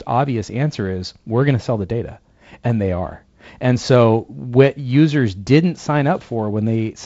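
Speech over G.722 wideband telephone coding at what sounds like 48 kbit/s, with light coding texture and nothing above about 7.7 kHz, and no technical faults present.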